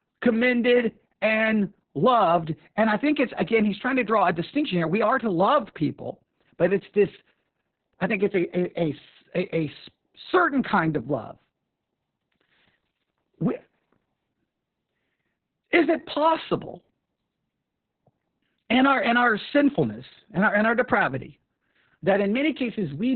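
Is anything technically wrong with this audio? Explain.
Yes. Opus voice compression runs through the whole speech clip, and the damage is heavy. Everything above about 4 kHz is gone, which points to narrowband SILK mode at a bitrate near 6 kbps. The linear-prediction coder rebuilds each stretch from a spectral envelope plus a coarsely quantised excitation, so the voice sounds muffled, hoarse and slightly robotic. A plain low-pass filter would only dull the sound. This has a rough, buzzy graininess instead, and none of the watery swirl of a transform codec.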